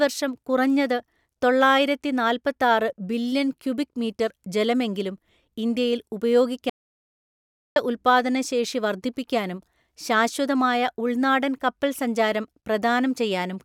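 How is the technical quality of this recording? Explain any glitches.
The recording has one clear glitch, an audio dropout to silence. From 6.70 to 7.76 s the speech cuts off mid-flow and about 1.06 s is lost. The input was likely interrupted while the recorder kept writing silence. Unlike a natural pause or noise gate, the room tone vanishes completely, and the speech restarts abruptly.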